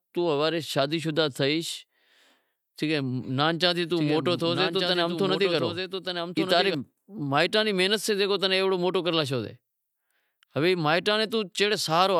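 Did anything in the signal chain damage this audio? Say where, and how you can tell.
Yes. From 3.97 s to 6.75 s the speech carries a doubled audio track: a full-band copy trailing about a second behind, roughly 5 dB quieter, with no reverberant tail or added colouring. It starts and stops abruptly and ends just before "مائیٹاں ری محنت سیں". On a spectrogram the harmonic pattern repeats, shifted right by about a second. The waveform shows stacked, offset envelopes. The likely cause is a second, slower capture path or an out-of-step edit.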